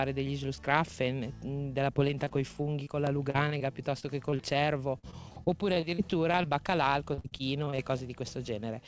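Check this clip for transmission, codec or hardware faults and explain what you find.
Repeated packet loss (robotic sound) occurs in two stretches, 1.94 to 6.47 s and 7.14 to 7.80 s, over audio band-limited at 8 kHz, which fits a G.722 call path. Packets kept going missing, and each hole, none longer than about 45 ms, was patched by extending the preceding sound. The result is choppy stuttering with pieces missing, denser in the second stretch. Unlike a single dropout, the gaps recur in quick succession.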